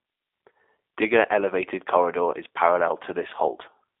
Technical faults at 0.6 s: G.729 codec

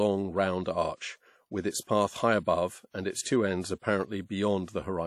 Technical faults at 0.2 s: WMA compression

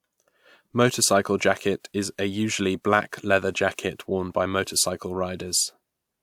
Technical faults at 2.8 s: none

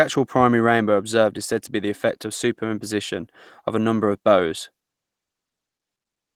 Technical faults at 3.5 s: none

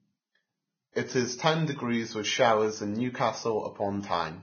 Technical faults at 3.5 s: Vorbis compression

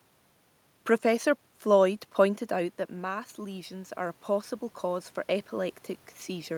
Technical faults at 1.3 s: none

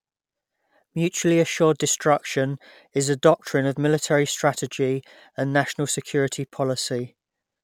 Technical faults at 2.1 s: none

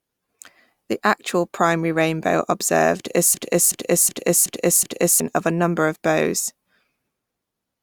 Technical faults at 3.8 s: system hang loop

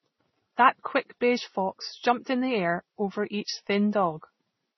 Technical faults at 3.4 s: transcoding between lossy codecs

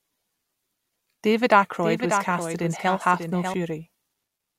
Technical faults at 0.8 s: none

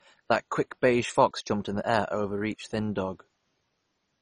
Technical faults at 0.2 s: MP2 compression

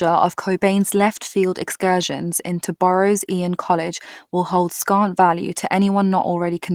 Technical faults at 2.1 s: none

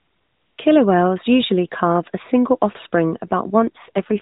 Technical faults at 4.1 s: AMR rate drop

